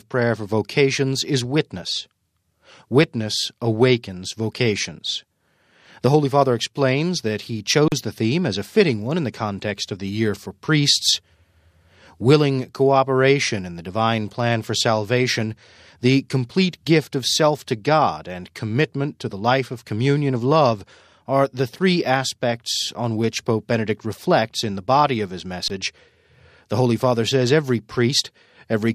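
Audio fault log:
7.88–7.92 s and 25.68–25.70 s, underrun with held sample: twice the output buffer ran dry, for 40 ms and then 20 ms, and the converter held its last sample value until data arrived again. The waveform sits flat at that held level, so the sound simply stops without a strong click. Roughly the same stretch of audio is skipped each time, so when the signal resumes it picks up further on rather than where it stopped.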